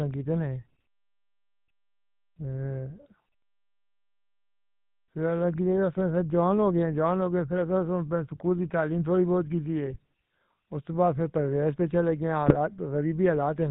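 A buzzy, gravelly roughness runs through the whole recording, and the speech has a dull, boxed-in quality with nothing audible above 4 kHz. This is the sound of the GSM full-rate codec, which fits a 13 kbps stream. The codec rebuilds the voice from a vocal-tract filter fed by a sparse pulse train, keeping only every third excitation sample, so the fine texture of the voice is replaced by that grainy buzz.

Two short bursts of squawking, gargling breakup interrupt the speech, from 9.86 to 9.97 s and again from 12.47 to 12.56 s. Each lasts only about a tenth of a second, and the spectrum lurches while the level jumps for an instant. These are GSM bit errors, consistent with corrupted bits arriving at the decoder over a weak link. The damage spans roughly a handful of frames each time, at a bit error rate of around 1%. Wrong filter, pitch or gain values make the decoder briefly reconstruct garbled sound.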